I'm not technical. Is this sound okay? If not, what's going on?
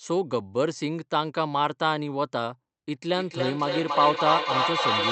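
No. From about 3.16 s to the end, everything comes back about every third of a second, each repeat thinner and more ringing and piling up as loud as the original. This is feedback echo between two devices: two nearby devices on one call keep re-capturing each other's sound.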